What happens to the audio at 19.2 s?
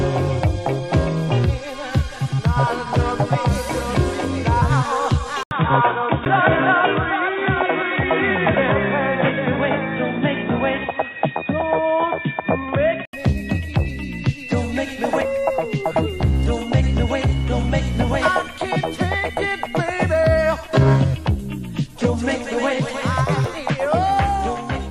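Nothing goes wrong at 19.2 s; the audio plays through that moment intact, with no dropout, click or distortion.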